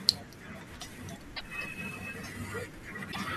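At 1.33–1.41 s and again at 3.09–3.16 s there's damaged data in the compressed stream: the decoder misreads corrupted frames, loses sync, and spits out a brief chirp, squawk, click or short hole.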